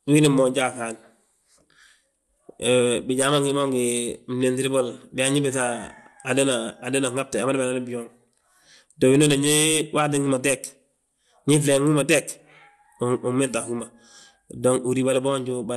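Throughout the speech the sound is dull, with nothing above 12.2 kHz, and a gurgling, granular roughness is plainly audible. This is likely MP2 compression at a low bitrate, around 80 kbps, where upper sub-bands drop out and the remaining bands are coarsely quantised.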